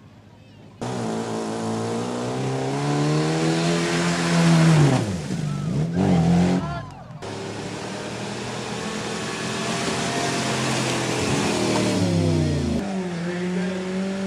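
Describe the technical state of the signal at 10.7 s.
At 10.7 s the signal is intact, with no audible fault present at that moment.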